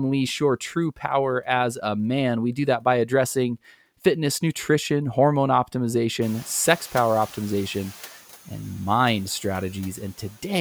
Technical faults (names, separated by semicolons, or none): noise suppressor catching up